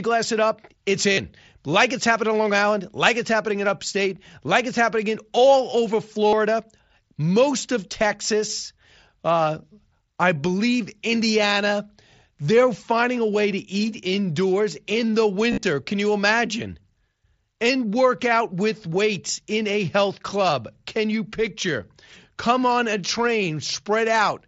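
Speech over a Bluetooth headset link shows concealed Bluetooth headset packet loss at 1.13–1.18 s, 6.28–6.33 s and 15.51–15.63 s, the last scattered over 0.12 s. Lost packets are patched by repeating recent waveform, so instead of silent gaps you hear a brief buzzy, full-level tone with a slight warble on recovery.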